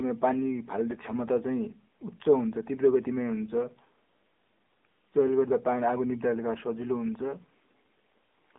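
Throughout, the speech carries AMR narrowband mobile codec damage: band-limited to roughly 250 Hz–3.5 kHz, nothing above 3.6 kHz, with plainly buzzy, synthetic vocal-tract coding, consistent with about 8 kbps.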